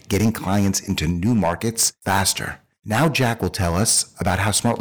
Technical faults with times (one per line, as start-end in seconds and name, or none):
0.00-4.80 hard clipping